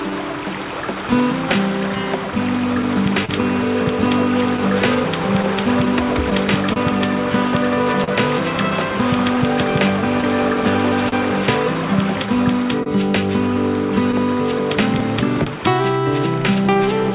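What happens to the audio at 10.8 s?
At 10.8 s, clock drift between sender and receiver is at work. The sender runs about 2% slow, so the receiver's buffer keeps draining.

The repeated timing corrections run from 0.1 to 15.4 s. The receiver repeats short pieces, stretching playback to 99% speed and adding roughly a tenth of a second. This is heard, if at all, as slight hiccups or an unsteady tempo.

Scattered short gaps also run from 1.5 to 16.8 s. There are about twenty lost or late packets, the longest around 40 ms. Each is patched by continuing the last sound, which leaves brief ticks or smears. All of this is heard through a telephone-band codec with nothing above 4 kHz.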